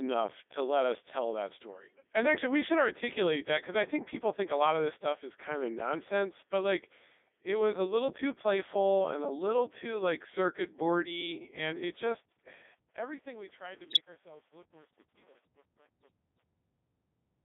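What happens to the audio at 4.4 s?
At 4.4 s the speech carries Codec 2 vocoder damage, as it does for the whole clip. The waveform is not kept. Only pitch, voicing, energy and a spectral envelope survive, and the decoder rebuilds the voice from sine waves. The result is a robotic, buzzy tone with heavy artefacts, which fits the codec's top 3.2 kbit/s mode. The sound is also held to a radio-like band of about 300 Hz to 3.6 kHz.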